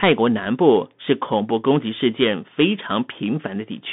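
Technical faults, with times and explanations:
Throughout, Bluetooth CVSD headset codec: the speech is confined to a narrow band of about 150 Hz to 3.6 kHz, and the damage is plainly audible. A one-bit up-or-down coder with an adapting step can't follow fast, loud changes, so sibilants turn scratchy, while its constant stepping leaves a granular hiss riding under the speech. That grainy, scratchy texture, consistent with a 64 kbps headset link, sets it apart from a clean telephone band-limit or a wideband mSBC link.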